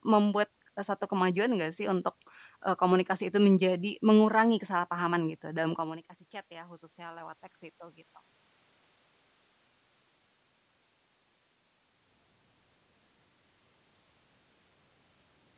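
Just after "komunikasi itu menjadi mengurangi", from 5.20 to 8.09 s, automatic gain rising sets in. The speech level falls by about 17 dB as the talker moves away, and the gain control slowly adds about 6 dB. Unlike a talker moving closer, the room noise swells along with the voice.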